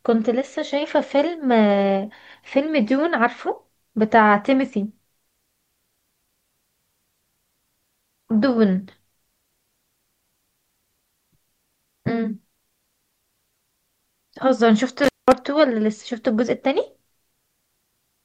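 A speech recording with one intermittent contact fault between 15.04 and 15.32 s: the audio cuts out for about 194 ms, as if a loose cable or plug briefly lost its connection. Crackle marks the break and the reconnection, and faint hiss remains while the line is open. That scratchy edge and the hiss floor separate it from a digital dropout or packet loss, which falls to clean silence with abrupt boundaries.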